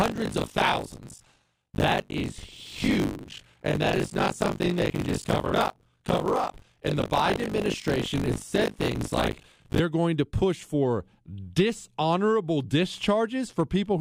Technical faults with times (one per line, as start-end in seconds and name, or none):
0.00-9.81 buffer tearing